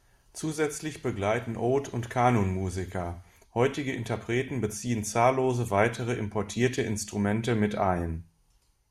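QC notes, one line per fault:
No technical faults turn up anywhere in this speech recording on listening.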